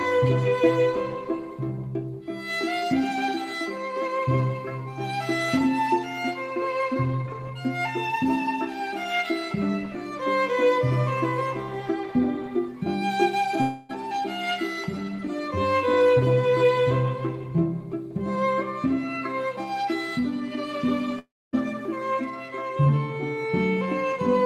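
At 13.61 s the sound breaks into a fading buzz that lasts until 13.91 s. About 280 ms never returns, and the gap is filled with a continuation of the last sound. At 21.19 s it happens again. A brief hiss fades into roughly a quarter-second of silence, and the audio resumes at 21.55 s with about 340 ms gone. The likely cause is a long network dropout. The receiver stretched old sound over missing packets, and then the lost stretch was skipped.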